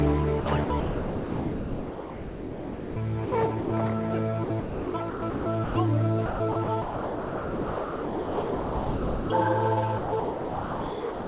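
Sound chopped by the voice detector, 0.4 to 2.96 s: the sender's detector likely kept switching off and on, so about 2.28 s of sound is replaced by comfort noise in several holes.

Sound dropped by the voice detector, at 3.26 to 3.32 s and 3.6 to 3.7 s: the detector likely mistook sound for background and stopped sending. Each gap, 60 ms and 100 ms, becomes steady comfort noise until transmission resumes.

Sound chopped by the voice detector recurs at 4.44 to 5.76 s (0.8 s replaced), 6.26 to 9.3 s (2.7 s), and 9.98 s to the end (1.22 s). The same repeated gating into comfort noise is the likely cause. The call path, whose band stops at 4 kHz and fits G.711 mu-law, is heard throughout.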